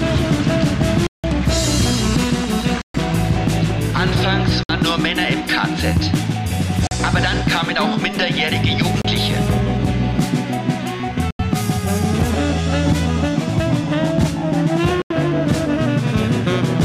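Abrupt holes cut the sound at 1.07 to 1.24 s, 2.82 to 2.94 s, 4.63 to 4.69 s, 6.87 to 6.91 s, 9.02 to 9.05 s, 11.31 to 11.39 s and 15.02 to 15.10 s. These are blocks of digital silence, where output samples were zeroed. The 170, 85 and 43 ms lengths fit buffer-sized dropouts that went unfilled.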